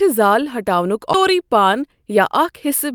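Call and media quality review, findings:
CD skip at 1.13 s, after "زال ہٹاونک": tick, a few ms of mute, then speech resumes from a different position. Laser jumped to another spiral track, from a disc flaw or knock.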